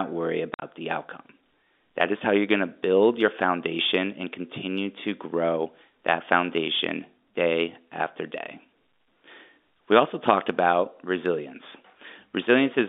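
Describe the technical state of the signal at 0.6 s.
At 0.6 s the speech drops out in hard-edged holes of silence, just before "the outcome". This is packet loss filled with silence. Between 0.54 and 0.62 s about 70 ms is missing, the longest gap 50 ms, which fits 10 ms packets.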